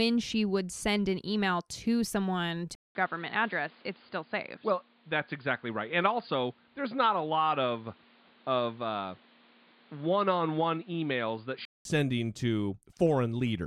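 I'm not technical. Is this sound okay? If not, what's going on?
No. At 2.75 s, after "an email to someone", the input likely switched to a poorer device. After a brief gap, the sound turns dull and muffled, with faint new background noise, until 11.85 s.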